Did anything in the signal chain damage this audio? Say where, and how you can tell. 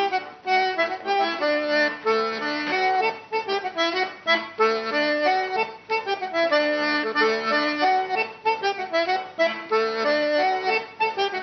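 No, nothing in the signal chain has left an audible mark on this audio. Listening closely, no stage from capture through to playback gives any sign of trouble.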